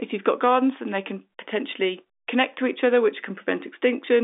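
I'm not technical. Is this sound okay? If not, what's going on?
Yes, nothing is wrong with this speech recording. It has the narrow sound of an ordinary landline call, because telephone coding keeps nothing above about 3.7 kHz, and that is expected for a phone line.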